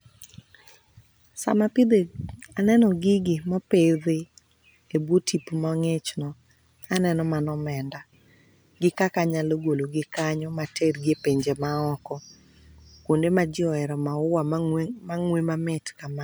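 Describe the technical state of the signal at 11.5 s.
At 11.5 s the speech carries sample clock jitter, present across the whole clip. The converter's timing wanders by around a microsecond, so steep waveform slopes are sampled at wrong values, leaving a faint hiss roughly 45 dB below the signal that tracks loud, bright passages.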